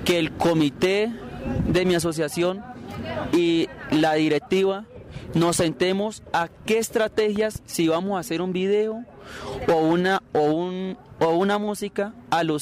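A loud pop hits at 7.36 to 7.58 s: two sharp thumps in quick succession, peaking roughly 5 dB above the surrounding sound, which continues beneath them. The likely cause is a sudden voltage pulse, from a plug, switch, static discharge or driver glitch, entering the signal chain.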